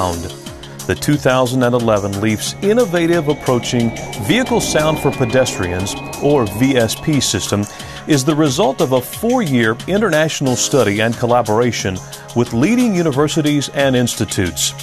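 Nothing goes wrong anywhere in this one; there's no glitch, dropout or other technical slip to point to at any moment.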